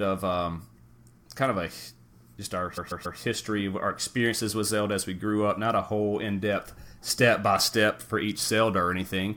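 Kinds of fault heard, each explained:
Repeated frames: a run of compressed frames was sent more than once, so the decoder replays the same audio. Right after "just our", a block of about 140 ms plays three extra times, from 2.77 to 3.18 s, a stutter that adds 418 ms.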